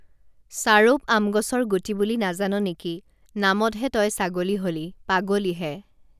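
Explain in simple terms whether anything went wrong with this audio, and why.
Nothing went wrong with this recording of speech, as no dropouts, clicks, distortion or other glitches can be heard anywhere in it. Every part of it sounds the way it should, so there is no problem to explain.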